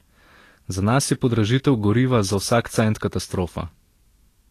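Throughout the speech, the likely cause is Vorbis compression at a low bitrate around 39 kbps: coarse treble quantisation swaps fine detail for noise of similar energy, and nothing remains above 14.2 kHz. The result is plainly audible hiss and graininess, with roughened tones and softened consonant attacks.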